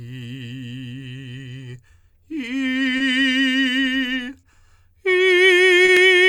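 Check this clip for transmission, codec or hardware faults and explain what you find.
The music carries three related transmission faults, all tied to the sender and receiver running on slightly different clocks.

Throughout the clip the pulse feels faintly uneven, as if the playback keeps catching its breath. This is clock drift between sender and receiver: the sender's clock runs about 2% slow relative to the receiver's. The jitter buffer is therefore fed more slowly than it is drained, so the receiver has to keep patching the timeline to avoid running dry.

From 0.20 to 2.62 s the music is played at 98% speed. These are repeated timing corrections. The receiver stretches or repeats tiny slices to compensate for the slow sender, adding roughly 50 ms in total across this stretch. Every edit pushes the same way but arrives at uneven spacing.

At 2.97, 4.40 and 5.85 s a sound hangs on a moment too long, with a slight buzzy or dipped quality, before the music carries on from where it left off. 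Each is a short stall from a late packet. The buffer ran empty, so the receiver sustained the last sound for 30 ms until the packet arrived. Nothing is lost, but each stall adds 30 ms of delay.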